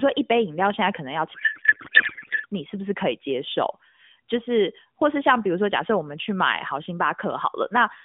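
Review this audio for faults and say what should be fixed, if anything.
From 1.34 s to 2.46 s the speech gives way to garbled noise and warble that barely tracks it. This is a codec payload misread. The AMR stream was packed in octet-aligned mode but decoded as bandwidth-efficient, so each frame's fields were read from the wrong bit positions and the decoder synthesised nonsense from plausible-looking parameters. Around it, the narrowband AMR path sounds like its higher-rate mode, band-limited to roughly 150 Hz to 3.6 kHz. To prevent this, make sure both endpoints negotiate and honour the same AMR payload format, octet-aligned or bandwidth-efficient, in the session setup.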